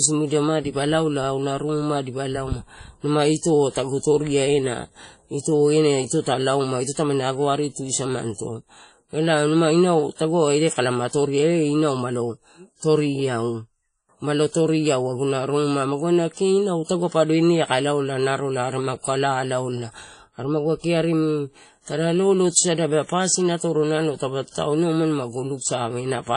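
Throughout the speech, the sound has a ringing, washy quality, with a hiss that swells and fades along with the signal. Nothing is heard above about 10.1 kHz. This is likely WMA compression at a low bitrate, consistent with around 32 kbps. Its long transform blocks smear quantisation noise over tens of milliseconds, and zeroing weak spectral lines leaves the thin, watery texture. Unlike simple low-pass filtering, the damage moves with the signal rather than just dulling the top end.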